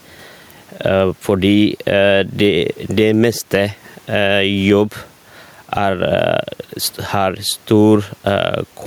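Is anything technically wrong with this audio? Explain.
Yes, there's gain pumping running through the whole clip. The level ducks each time the speech gets loud, swinging by roughly ten decibels. That's likely the mic gain being set way too hot, with a fast limiter or compressor slamming it down on every loud syllable. The result sounds squashed, with loud and quiet parts pushed close together, and the room noise sits about 43 dB under the speech.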